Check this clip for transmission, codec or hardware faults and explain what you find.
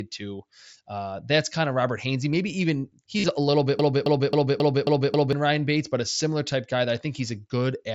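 Two faults appear in this speech clip, carried over what sounds like a wideband mSBC Bluetooth headset link with its band stopping near 8 kHz.

From 3.18 to 3.28 s, just before "a little bit", there is concealed Bluetooth headset packet loss. Lost packets, about 68 ms in total scattered across roughly 105 ms with the longest gap near 38 ms, were filled by repeating recent waveform. It sounds like a brief buzzy hold with a warble. On a spectrogram it shows as smeared, periodic striping; the waveform shows cloned cycles.

From 3.79 to 5.33 s, right after "a little bit", a broken-record loop repeats one 269 ms fragment six times back to back. The likely cause is a stalled player or stream resending its last buffer, so the intended audio is lost. The waveform shows identical blocks tiled edge to edge, and the spectrogram shows a repeating pattern with a regular period.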